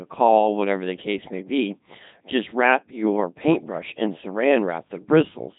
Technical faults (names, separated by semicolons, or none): Codec 2 vocoder